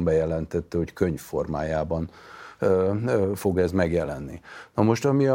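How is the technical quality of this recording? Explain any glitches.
No glitches or technical faults can be heard here.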